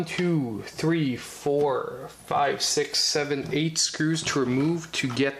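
Nothing goes wrong anywhere in this one; there's not a single technical fault to point to along the whole way.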